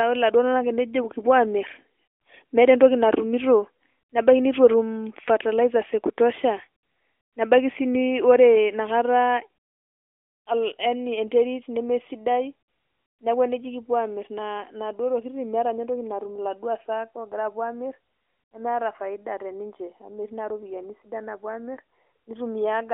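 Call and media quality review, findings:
No faults found.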